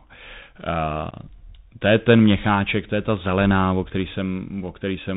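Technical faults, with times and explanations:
Throughout, Bluetooth CVSD headset codec: the speech goes through the narrowband CVSD headset link at 64 kbps, one up-or-down bit per sample, so nothing gets above 4 kHz. Sibilants come out scratchy, loud bright bits overshoot the adapting step and distort, and there's a grainy hiss underneath. The damage is easy to hear.
1.11 to 1.14 s, unconcealed Bluetooth headset packet loss: about 11 ms of audio just drops out, roughly three headset packets' worth, and nothing fills the gap. You get a short hole with hard edges that can click, and the speech comes back a touch quieter for a moment, as a CVSD link tends to do.
2.67 s and 4.10 s, dropped samples: a single sharp click at each. The first is between "to je ten" and "to je ta zelená", the second just after "ta zelená o který". Each is likely a tiny handful of samples going missing, only a fraction of a millisecond, so the waveform jumps straight to a later value. 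The gap is far too short to lose any sound, just that thin tick.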